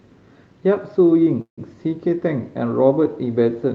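At 1.41 to 1.60 s, a call audio freeze: delayed packets likely emptied the jitter buffer, leaving a brief fading buzz, then silence, before speech resumes intact.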